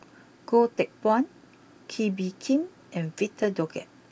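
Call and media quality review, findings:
No audible faults found in the speech; nothing to attribute to any component.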